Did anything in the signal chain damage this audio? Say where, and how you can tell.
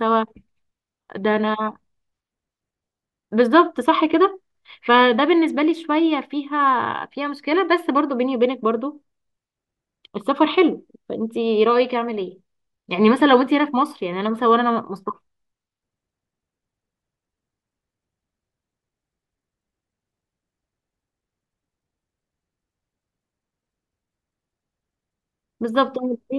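No, nothing in the signal chain damaged this audio.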